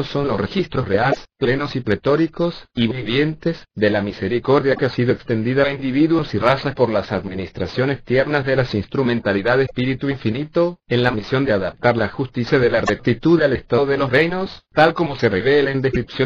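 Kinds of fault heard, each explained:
Damaged data in a compressed stream: corrupted bytes make the decoder misread frames and lose sync, giving brief glitches at 1.09, 4.76, 9.63, 12.86 and 15.90 s, each 23–83 ms. Waveforms show abrupt discontinuities; spectrograms show short vertical smears of garbled broadband energy.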